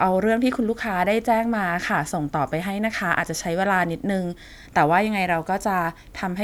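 No technical faults can be heard anywhere in the speech. Nothing in the recording stands out as a problem that would need a time or a fix.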